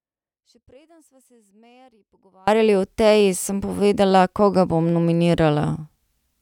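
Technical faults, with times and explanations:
0 to 2.48 s, audio dropout to a faint residue. The clip opens with the dropout already under way. The gap holds only faint sound, roughly 35 dB below the normal level. At 2.48 s the full signal returns abruptly, with no fade. That sudden step marks it as a loss of the wanted feed rather than a pause. The likely cause is a break upstream while the path after it stayed live.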